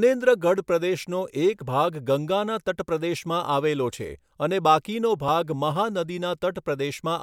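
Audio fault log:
No fault found in this speech recording; the log has nothing to enter.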